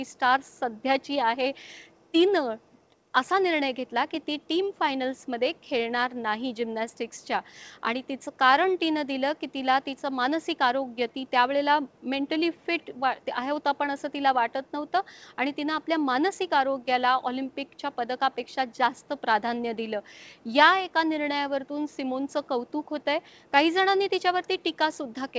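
There are no technical faults to describe in time order; the audio comes through the G.722 call path as that codec normally sounds, with nothing above 8 kHz.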